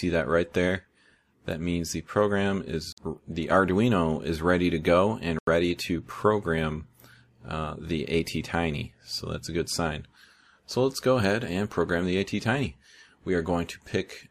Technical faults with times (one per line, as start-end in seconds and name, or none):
2.92-2.98 Bluetooth stall
5.39-5.47 Bluetooth stall